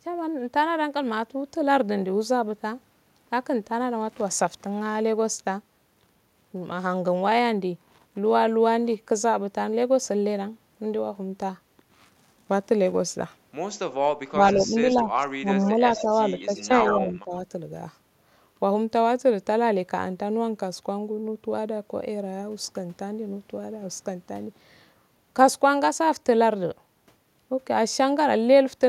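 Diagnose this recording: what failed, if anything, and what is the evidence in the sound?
Speech suppressed in double talk at 14.31–14.75, 14.92–15.82, 16.02–16.15, 16.37–16.70 and 16.96–17.33 s: the speech dips repeatedly, deepest (about 25 dB) in the 14.92 s stretch. This is a call-processing fault. The echo canceller likely could not separate both talkers and turned the near side down.

Echo leak at 15.96–16.13, 16.57–16.64 and 16.85–17.06 s: brief copies of the speech trail it by 136 ms, ranging from faint to nearly as loud as the original. This is also call processing. A loudspeaker-side echo canceller likely left part of its microphone pickup and sent it back.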